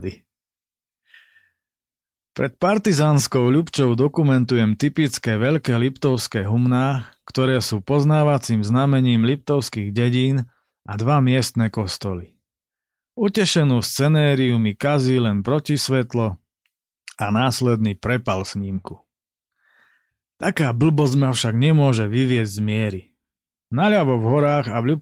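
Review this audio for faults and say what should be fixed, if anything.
Nothing here needs fixing: the speech comes through the Opus voice compression stage with only the light softening expected from a hybrid-mode, fullband setting at a moderate bitrate.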